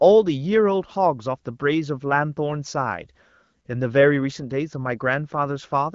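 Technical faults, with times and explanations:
No technical faults detected.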